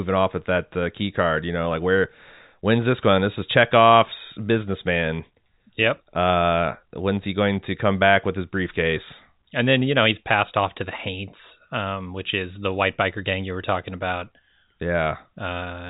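No technical faults can be heard in the speech, which carries the narrow band of G.711 telephone coding with nothing above about 3.8 kHz.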